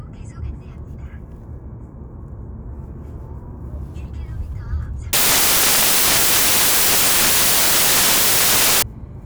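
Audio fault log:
5.13–8.82 s: samples built from the wrong bytes. The sound gives way to loud, harsh broadband noise that runs until 8.82 s. The reader is joining each sample's bytes in the wrong order or from the wrong offset. The quickly changing low bits end up as the large part of every value. What was fine detail becomes loud randomness.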